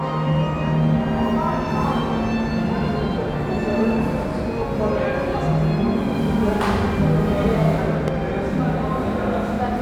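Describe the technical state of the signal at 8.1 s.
A single loud pop occupies 8.08 to 8.10 s, peaking roughly 10 dB above the surrounding sound, which continues beneath it. A sudden voltage step or pulse, likely from a switch, plug or static discharge, was added to the signal and shaped by downstream circuitry into this sharp thump.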